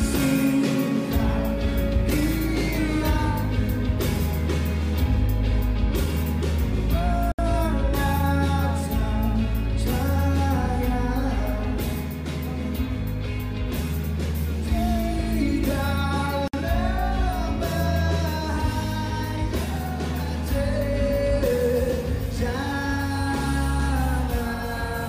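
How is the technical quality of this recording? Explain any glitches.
There are two glitches, both gaps at a join of encoded pieces, at 7.32 s (about 69 ms) and 16.48 s (about 57 ms). Separately encoded segments were butted together untrimmed, so encoder delay and end padding leave brief silences with smeared edges before the sound resumes where it stopped.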